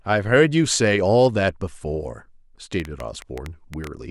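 From 2.80 to 3.88 s, a train of clicks ticks over the speech, around ten sharp, similar pops arriving unevenly at about 7.5 per second and standing out well above the voice. Their uniform shape points to a likely cause in electrical interference or a faulty connection or power supply.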